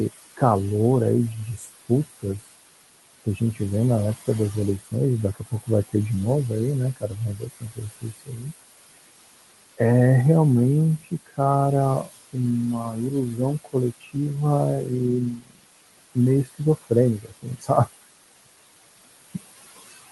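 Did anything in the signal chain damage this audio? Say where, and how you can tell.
Yes. The damage happened in call processing, where a noise suppressor pulls down the steady room noise, which sits about 13 dB below the speech, by about 19 dB throughout. Gain is set band by band on each short frame, so the noise floor drops away in pauses and comes back under each phrase.

The same stage also mistakes parts of the speech for noise. This speech cut by the noise suppressor occurs at 1.57–2.25 s, 3.25–3.6 s, 4.84–5.95 s, 6.94–8.47 s, 10.99–11.39 s, 12.04–14.16 s and 14.84–17.88 s. The drops reach about 14 to 22 dB, hitting brief stretches totalling from a fraction of a second to about a second per span. Soft consonants and quiet tails are turned down along with the background, so they sound swallowed or faint.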